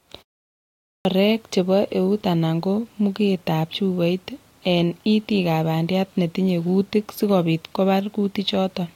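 At 0.5 s, after a pause of about 0.35 s, the speech comes back with a clipped start after a pause. The output device has dropped into a low-power state during the silence and needs time to wake and lock again. For the first 0.55 s, up to 1.05 s, nothing reaches the output, so speech begins abruptly, mid-stream, out of dead silence, with its opening sounds missing rather than faded in.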